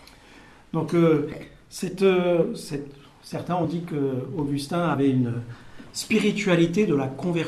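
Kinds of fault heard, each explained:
Compressed frames skipped: missing 24 ms frames make audio jump ahead at 2.41, 3.64 and 4.93 s, leaving waveform discontinuities and spectrogram streaks.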